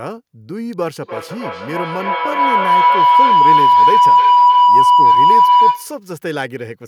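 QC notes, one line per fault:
0.73 s, electrical switching spike: a nearby switch or motor likely arced, and the audio line picked up the discharge. It lands as a sharp snap laid over the speech, far too brief to carry any pitch of its own.
1.03–6.06 s, feedback howl: two devices in the same room joined one call, so microphone and loudspeaker formed a loop that added gain on every pass. The sound narrows to a tone around 1 kHz, with the loop repeating roughly every third of a second, and peaks about 14 dB above the speech.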